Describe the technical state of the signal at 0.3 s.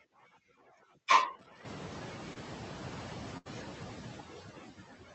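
At 0.3 s, noise suppressor artifacts are present, as they are across the whole clip. The suppressor pulls down the bands it judges to be steady noise, frame by frame, by about 4 dB. The leftover background therefore dips and swells. The call codec path is present too: the highs stop near 8 kHz.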